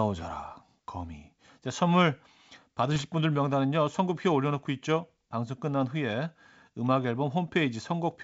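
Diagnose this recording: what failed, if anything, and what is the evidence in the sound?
Bit errors on an ADPCM link, in the transmission stage: a short rough burst with pops and a brief level wobble from 2.92 to 3.01 s. A few flipped bits corrupt the G.722 decoder's step size and predictor, so each error rings on for several milliseconds.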